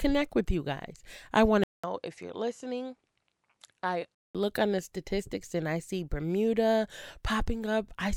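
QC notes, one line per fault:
1.64–4.35 s, input switched to a poorer device: a 200 ms silence opens the section, then the speech turns duller and a little quieter, with nothing above 11.4 kHz and a faint new background noise sitting well beneath it, before the original fuller sound returns at 4.35 s. This is likely a change of capture source mid-recording, where the second input's narrower band, different gain and own noise floor reshape the tone until the original input comes back.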